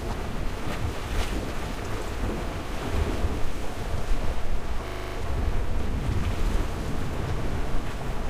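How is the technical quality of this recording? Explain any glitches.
The recording has one clear glitch, a system hang loop from 4.88 to 5.16 s. During this stretch the computer or audio driver stalled while the playback hardware kept cycling through its ring buffer. A single 40 ms slice of sound repeats seven times, producing a rapid, rattling buzz at 25 Hz. Essentially no audio is lost afterward. On a waveform you'd see seven identical 40 ms blocks in a row. A spectrogram shows evenly spaced vertical stripes every 40 ms and a fine comb of lines 25 Hz apart.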